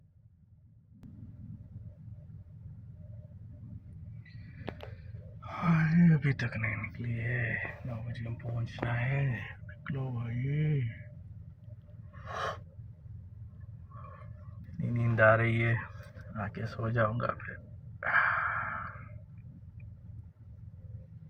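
At 1.03 s the level steps up abruptly by about 12 dB and holds there to the end, a sudden gain jump. The background noise rises by the same amount at the same instant as the sound, which points to a digital gain change likely applied between two samples with no ramp. That shared, instantaneous step distinguishes it from automatic gain control, which would ease in over time and pump with the level of the sound.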